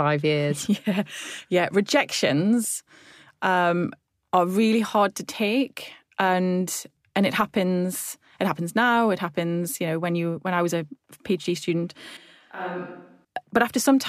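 Speech runs for about 14 s, and from 12.17 to 13.25 s it abruptly turns roomy, hollow and thin in the bass. The level drops by roughly 10 dB and background noise rises to roughly 40 dB below the speech before the close sound snaps back. That points to a switch to a distant microphone, likely a camera or room mic covering for the close one. A simple gain dip would leave the tone intact, and added reverb wouldn't strip bass or lift noise.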